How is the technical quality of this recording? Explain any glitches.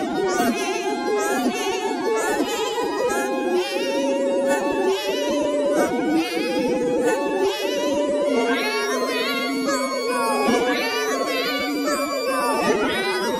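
The recording has plainly audible coding damage throughout, plus two brief glitches.

MP2 compression runs through the whole clip. The dull tone and gurgling, granular texture fit MPEG Layer II coding at a low bitrate, likely around 80 kbps. Starved of bits, the codec switches off upper sub-bands, which flicker in and out, and coarsely quantises the bands it keeps.

DAB burbling occurs at 1.61 to 1.72 s and again at 9.28 to 9.31 s. Bit errors, at a rate of a fraction of a percent, slipped past error correction into the MP2 data. The result is short blips of noise in single sub-bands. The first burst points to several corrupted frames and the second to a few.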